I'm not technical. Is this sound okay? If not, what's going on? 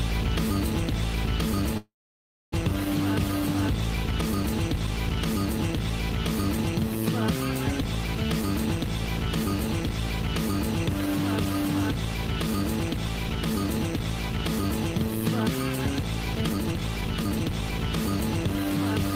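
No. A call audio freeze runs from 1.77 to 2.54 s. The last sound is stretched out briefly, then there is silence for about 0.62 s, and the audio picks up exactly where it stopped. Nothing is lost, but everything after now plays about 0.75 s late. This is likely because pieces of the audio were held up on their way, and the receiving side ran out of sound to play while waiting.

A jitter buffer speed-up runs from 16.42 to 17.73 s. Here the sound plays noticeably hurried, at about 146% of normal speed, yet its pitch stays the same. The receiver had built up more stored audio than it wanted, so it caught up by snipping out many tiny slices in a row, about 0.7 s in total. That's why this stretch feels rushed rather than higher.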